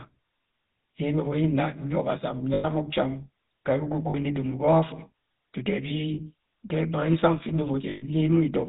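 GSM full-rate codec damage runs throughout the speech: pulse-driven vocal-tract modelling, fitting a 13 kbps stream, cuts everything above 4 kHz and leaves a plainly audible buzzy, gravelly roughness.

Lost GSM frames at 2.54 to 2.65 s (100 ms), 4.10 to 4.15 s (40 ms), 6.14 to 6.21 s (40 ms) and 7.90 to 8.04 s (120 ms) were each filled by repeating the last good frame, so the sound holds as a brief rough, metallic ring.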